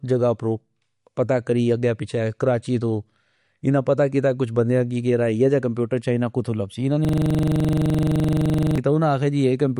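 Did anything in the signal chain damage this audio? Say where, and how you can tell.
Yes. Throughout the clip the speech has nothing above 11.2 kHz, and the upper band sounds watery and swirly, with sibilants turning metallic. That points to the codec stage, likely MP3 compression at a low bitrate, around 48 kbps. Starved of bits, the encoder has cut the treble and switches weak spectral lines on and off from frame to frame.

From 7.05 to 8.78 s a 42.7 ms fragment repeats exactly, about forty times, producing a 23.4 Hz buzz-stutter. That is a system hang loop at the driver or buffer stage. The host stalled while the audio hardware kept replaying its ring buffer, and the loop length fits a 2048-sample buffer.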